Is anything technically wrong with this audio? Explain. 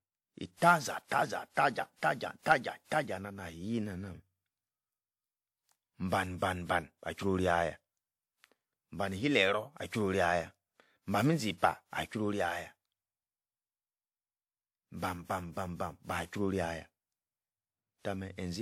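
Yes. Throughout the speech, the damage is most likely generation loss: repeated lossy decoding and re-encoding, which fits about seven passes through WMA at around 96 kbit/s. Each pass requantises on a shifted frame grid, so errors and spectral gaps accumulate, leaving a swirly, hollow, smeared sound with softened consonant attacks.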